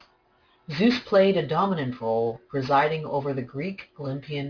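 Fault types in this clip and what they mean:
Aliasing: speech resampled without filtering, so sibilants fold back below 5.5 kHz, which fits an 11 kHz rate; sounds gritty, spectrogram shows mirrored energy, about 20 dB down, packed against that edge.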